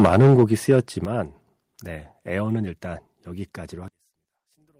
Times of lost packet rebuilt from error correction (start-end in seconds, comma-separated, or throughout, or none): none